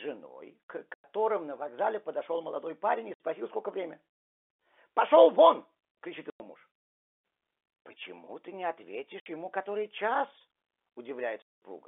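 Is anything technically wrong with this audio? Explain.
Yes. The speech has packet loss filled with silence: hard-edged holes at 0.94 s (100 ms, just before "на вокзале подошел молодой"), 3.14 s (60 ms, after "подошел молодой парень и"), 6.3 s (100 ms), 9.2 s (60 ms, between "ты не" and "ему который час") and 11.42 s (200 ms). Lost packets were replaced with silence, so each gap starts and stops abruptly. Every length is a multiple of 20 ms, which fits a 20 ms packet. Unlike concealed loss, nothing smears or repeats across the holes.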